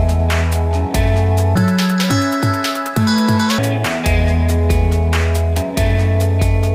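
From 1.56 to 3.58 s the audio is read two samples at a time (double speed): pairs of samples are taken as a single frame. The sound runs at 2x speed, a full 12 semitones higher.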